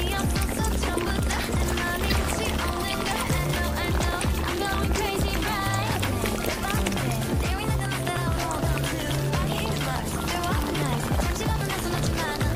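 At 2.08 s to 2.12 s there is a brief burst of damaged data in a compressed stream, lasting about 44 ms. Part of the encoded bitstream at that point is corrupt, so the decoder cannot parse the affected frame correctly, loses its place in the stream and has to search for the next valid frame header before it can resume normal decoding. The result is a short chirp or squawk that interrupts the audio.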